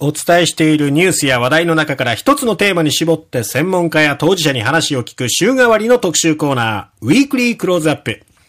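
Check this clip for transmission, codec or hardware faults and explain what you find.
The speech runs through a stage that cannot pass its full level: throughout the clip there is hard clipping, with the signal driven about 6 dB past what that stage allows. Around one percent of samples exceed the limit, so only the loudest peaks are sliced flat. Those squared-off tops generate high harmonics well above the speech itself, heard as a brittle crackle on louder syllables and emphatic moments.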